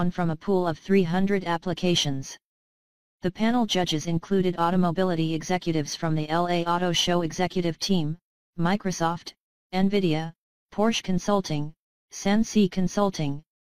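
No technical faults are audible.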